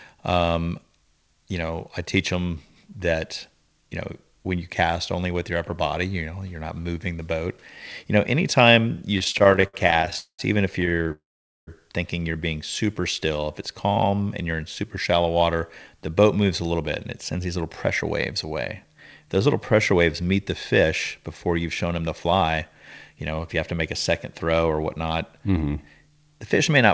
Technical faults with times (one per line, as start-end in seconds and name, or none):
9.18-10.40 repeated stalls (stutter)
10.80-11.12 repeated stalls (stutter)
11.12-11.69 call audio freeze
12.86-14.57 jitter buffer slow-down
17.31-20.35 jitter buffer speed-up
20.83-23.32 jitter buffer speed-up